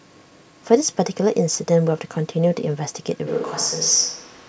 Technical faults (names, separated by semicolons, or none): switch to a distant microphone